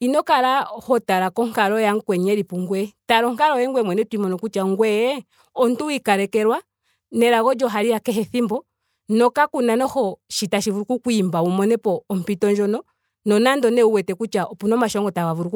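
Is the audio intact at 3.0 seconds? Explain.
Yes, the audio is intact at 3.0 seconds, with no fault audible at that point in the speech.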